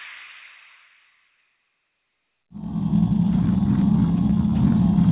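Nothing goes wrong anywhere in the clip; the sound simply carries the narrow, phone-call character of a G.711 A-law link at 64 kbps, with nothing above 4 kHz, which is just how that call path normally sounds.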